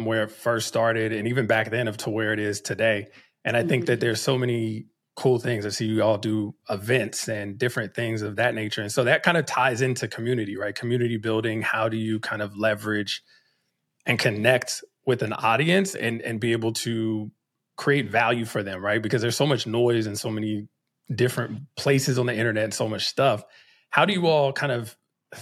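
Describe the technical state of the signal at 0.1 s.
At 0.1 s the speech signal is intact, with no dropout, distortion, glitch or other fault audible at that point.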